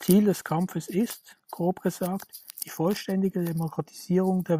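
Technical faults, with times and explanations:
No technical faults are audible, and the speech signal stays continuous and intact throughout.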